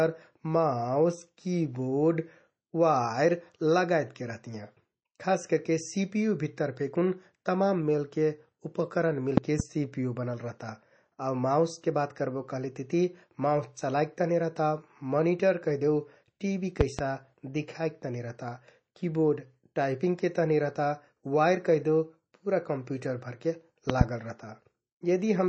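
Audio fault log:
Throughout: MP3 compression. The sound is plainly watery and swirly, with nothing above 8.4 kHz. This is likely a starved encoder, fitting about 32 kbps.
9.37–9.62 s, 16.81–17.01 s, 23.90–24.03 s: loud pop. Each is a double pop about 20 dB above the sound, likely from sudden voltage steps. The sound continues underneath.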